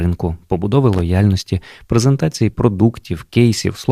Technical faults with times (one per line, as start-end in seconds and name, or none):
0.93-1.01 loose connector crackle